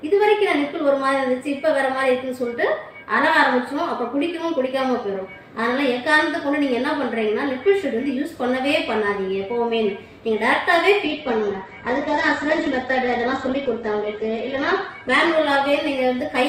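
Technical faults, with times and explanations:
11.06–16.49 s, call bitrate drop. The call's bandwidth estimate collapses and the encoder spends far fewer bits. Detail turns coarse and rough. The top end is cut above 8 kHz instead of 20 kHz, consistent with a fall from 48 to 10 kbps. It lasts about 3.6 s at worst and runs to the end.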